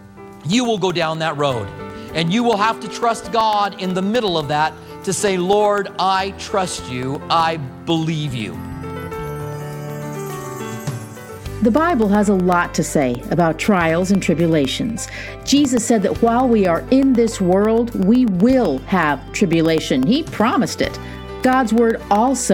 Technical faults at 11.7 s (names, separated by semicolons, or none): periodic USB or driver dropouts